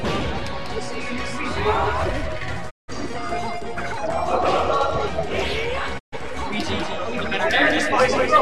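At 2.69 s and again at 5.98 s the sound fades out over about 20 ms and drops to silence, for 0.24 s and then 0.2 s. These are digital broadcast dropouts. The receiver muted when bad frames arrived, losing roughly 170 ms and 130 ms of programme, which fits four and three lost frames.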